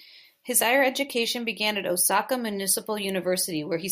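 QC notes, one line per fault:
No faults found.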